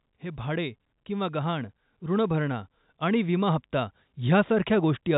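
From 0.05 s to 5.08 s the speech is affected by automatic gain rising. The level control judged the input too quiet and kept turning it up, adding about 9 dB across the clip, so the voice and the background noise swell together rather than the speech alone getting louder. On a waveform the envelope widens steadily from start to end. On a spectrogram the whole band, which stops at 3.8 kHz from the telephone coding, brightens gradually.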